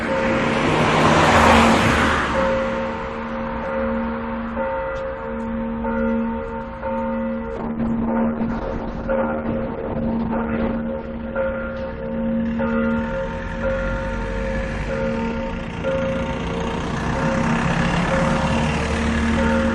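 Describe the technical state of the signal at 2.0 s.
At 2.0 s the signal is intact, with no audible technical fault at that moment.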